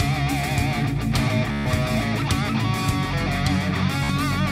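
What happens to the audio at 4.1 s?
A Bluetooth stutter runs from 4.04 to 4.10 s: about 56 ms of data went missing, which fits roughly four lost packets, so the receiver replayed its last short slice as a brief buzz. Unlike a plain dropout, the gap fills with repeats rather than silence, and the sound resumes further along.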